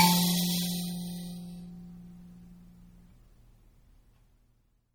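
Throughout the music, plainly audible MP3 compression is the likely cause of a watery, swirling texture. Short of bits, the encoder drops weak frequency lines frame by frame, which fits a bitrate near 48 kbps. A spectrogram shows a ceiling at 18.7 kHz and flickering gaps beneath.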